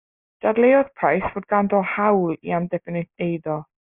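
A short speech recording with aliasing all the way through. The sibilants come out gritty and metallic, and the top of the spectrum runs hard into an edge at 3 kHz. That fits a downsample to about a 6 kHz rate with no anti-aliasing filter beforehand, so everything above 3 kHz folded back down as unrelated tones. The folded energy sits only around 20 dB under the speech.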